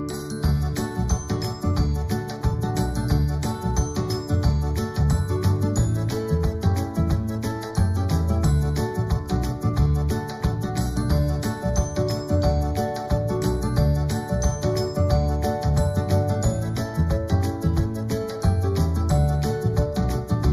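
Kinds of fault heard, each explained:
Channel delay (comb filtering): one channel arrives roughly a fifth of a millisecond behind the other. When the two are summed to mono, their shared content cancels at evenly spaced frequencies, starting around 3 kHz, leaving the whole clip hollow and phasey.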